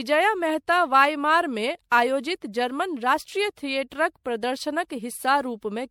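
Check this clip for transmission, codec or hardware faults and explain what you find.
There is one codec fault, and it runs through the whole speech clip. It sounds like generation loss. The likely cause is the audio being decoded and re-encoded with MP3 around ten times, each pass at a setting that points to 96 kbit/s. Every pass quantises again on a shifted frame grid, so errors and spectral gaps pile up. The result is swirly and hollow, with smeared consonant attacks. Nothing is present above 19.9 kHz.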